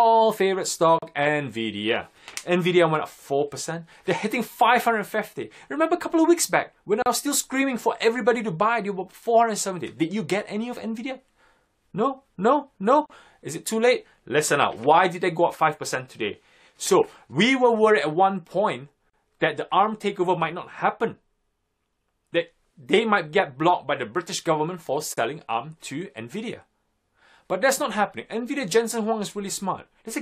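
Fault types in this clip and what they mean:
Gap at a join of encoded pieces: the audio was encoded as separate pieces about 6 s long and joined without trimming, so each encoder's start-up delay and final-frame padding remain as silence. The sound drops out for 37 to 39 ms at 0.99, 7.02, 13.06, 19.10 and 25.14 s, with smeared edges, then carries on from where it stopped, with nothing missing.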